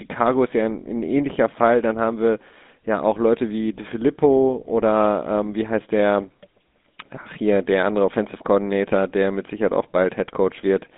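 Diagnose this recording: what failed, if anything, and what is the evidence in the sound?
The codec stage applied GSM full-rate coding throughout, consistent with a 13 kbps stream. Its pulse-driven vocal-tract model makes speech plainly buzzy and gravelly, with nothing above 3.8 kHz.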